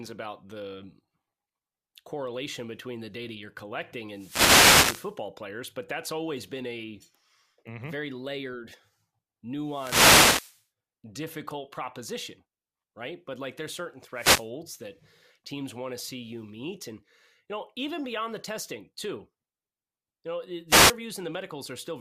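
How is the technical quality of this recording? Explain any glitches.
The speech is interrupted four times by wireless microphone noise hits: short swishes of static at 4.10 to 5.18 s, 9.64 to 10.64 s, 14.13 to 14.49 s and 20.68 to 20.95 s. Each time the FM radio link fades as reflected signals cancel, letting receiver noise surge up over the speech.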